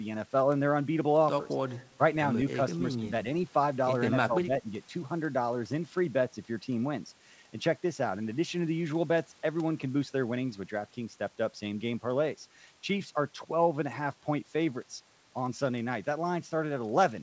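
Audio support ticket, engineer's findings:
Speech level dips briefly at 2.77–2.81 s, 3.00–3.11 s and 4.27–4.64 s. Drops of roughly 10 to 15 dB, deepest at 3.0 s and longest around 4.3–4.6 s. Likely speech suppressed in double talk: the echo canceller reads simultaneous far-end audio as echo and attenuates the near-end talker along with it. Top end stops at 8 kHz, consistent with a wideband call path that fits G.722 at 64 kbps.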